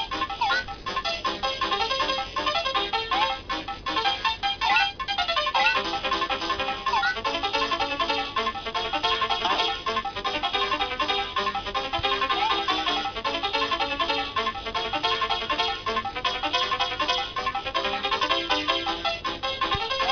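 From start to finish, the high end sounds gritty and metallic, with harsh tones that don't belong to the sound and a spectrum running hard up to about 5.5 kHz. This is aliasing: the audio was downsampled without an anti-alias filter, which fits a rate of about 11 kHz, so content above 5.5 kHz folded back as false frequencies, fairly strong at around 10 dB below the signal.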